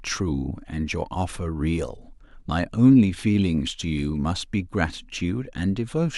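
No technical faults can be heard at any point in the recording. The speech continues without any audible break, glitch or disturbance.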